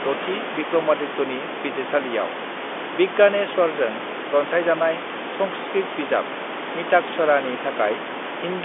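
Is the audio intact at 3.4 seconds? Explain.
Yes, the audio is intact at 3.4 seconds, with only the room noise and the narrow telephone band of G.711 coding, both part of how the clip was captured and carried, present at that point.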